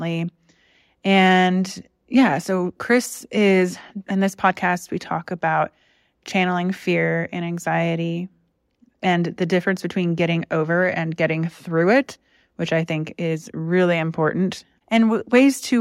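No technical faults are audible.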